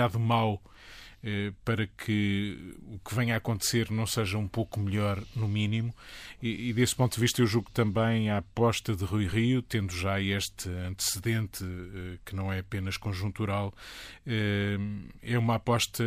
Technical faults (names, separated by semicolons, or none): none